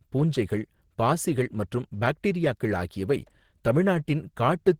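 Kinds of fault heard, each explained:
No faults detected in the speech recording.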